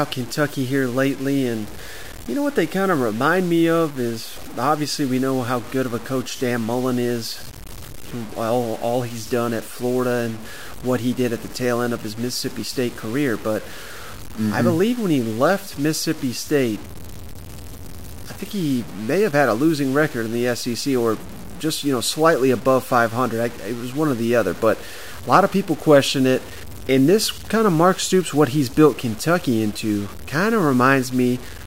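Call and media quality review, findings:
Low bit depth without dither, whole clip: sample values likely truncated to a very coarse word length, which fits a 6-bit path. Error tracks the speech, leaving grainy, signal-dependent distortion around 20 dB below it. Quiet syllables turn gritty; the softest tails sputter or drop out.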